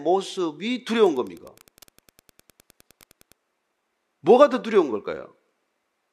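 From 1.00 s to 3.32 s the speech picks up Wi-Fi interference: a steady ticking roughly ten times a second, sitting well down under the voice, maybe 35 dB below it. That rate matches a Wi-Fi beacon going out every 102.4 ms. What's happening is that a radio sitting close to the audio circuitry is getting its bursts rectified into the signal path, so each beacon lands as a small click.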